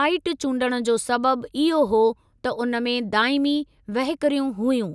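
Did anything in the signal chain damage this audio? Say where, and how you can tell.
No, nothing in the signal chain damaged this audio.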